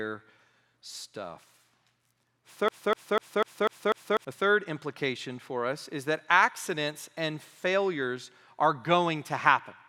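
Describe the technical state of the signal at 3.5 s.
At 3.5 s the speech is caught in a broken-record loop from 2.68 to 4.25 s: a 0.25 s fragment repeats six times back to back, likely from a stalled player resending its last buffer.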